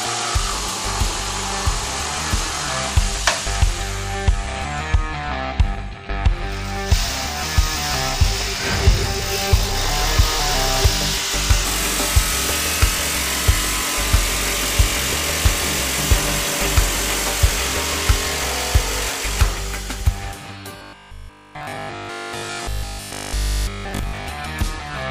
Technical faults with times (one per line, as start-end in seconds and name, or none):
20.77-24.27 robotic sound from repeated short buffers